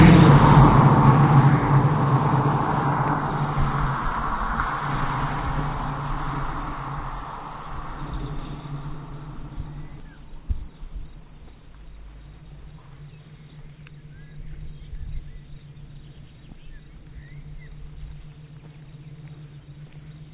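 Everyday sound carried over a call path whose G.711-style coding leaves nothing above 4 kHz has a skip ahead at 10.0 s: roughly 0.7 s of audio is missing, and the two sides are joined with no gap, showing as an abrupt seam in the waveform and spectrogram where audio was dropped in transit or by an overflowing jitter buffer.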